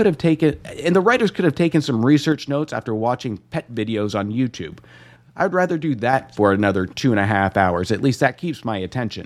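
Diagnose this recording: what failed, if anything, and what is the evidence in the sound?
The speech level falls abruptly by about 6 dB from 2.32 to 4.72 s, from 5.16 to 6.13 s, and from 8.28 s to the end. This is likely one channel dropping out at an intermittent stereo connection. Once summed to mono, the shared signal loses half its contribution.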